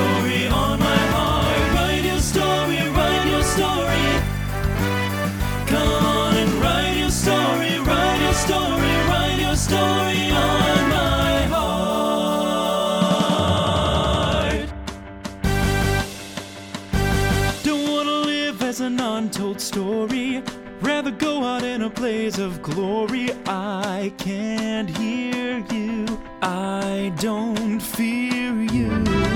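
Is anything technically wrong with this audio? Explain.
No, no technical faults here.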